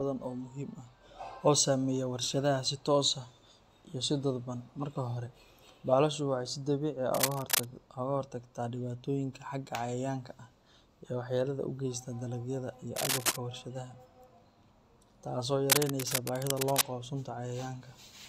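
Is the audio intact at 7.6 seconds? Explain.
No. From 7.12 to 7.65 s there is cable scratch noise, likely from a worn cable or connector being moved so its contact resistance jumps about rapidly. That injects dense, uneven noise bursts, heard as scratching roughly as loud as the speech itself.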